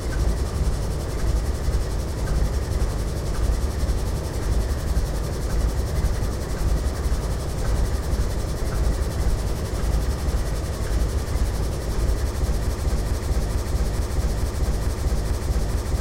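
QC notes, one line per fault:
12.67 s to end, broken-record loop: a fragment of about 0.44 s starts repeating exactly, back to back, eight times in a row, and the stuttering cycle carries on until the audio stops, so nothing new is heard after 12.67 s. The rigid, identical repetition points to a stall, likely in the player, encoder or stream, which kept re-sending the last piece it held while the audio that belonged in those final seconds was lost.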